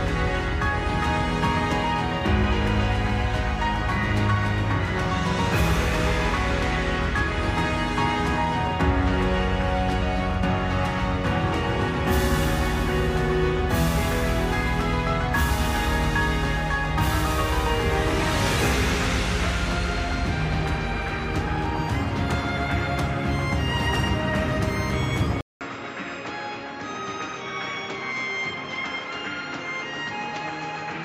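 At 25.41 s the recording most likely switched its input to a poorer device, such as another microphone or a headset's call profile, which stays in use to the end. A short silence of about 200 ms marks the switch. Afterwards the audio is duller and boxier, with nothing above 7.6 kHz. The level falls by roughly 10 dB, and a new background noise sits around 35 dB below the signal.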